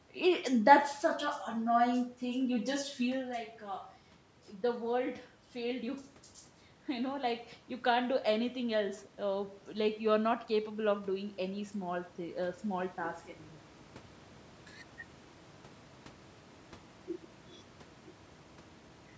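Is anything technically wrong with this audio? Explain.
Yes. From 10.65 to 13.26 s, just after "uh like you're not", there is automatic gain rising: the gain control judged the input too quiet and raised its gain by about 4 dB over two and a half seconds. Unlike a talker moving, which happens around 3.0 and 14.5 s, the room noise swells together with the speech.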